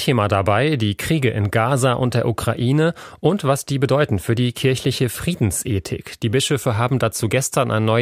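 Listening closely to the speech, nothing stood out as a technical fault at any point.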